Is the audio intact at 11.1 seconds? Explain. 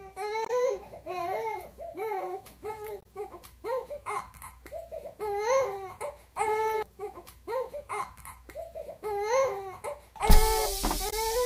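No. At 11.1 seconds the clip has damaged data in a compressed stream, from 11.09 to 11.13 s, about 44 ms. Part of the encoded data there is corrupt. The decoder cannot read those frames properly. It loses its place and scans ahead for the next valid frame header before normal decoding resumes. The result is a brief chirp or blip that breaks into the sound. It has no relation to what comes before or after.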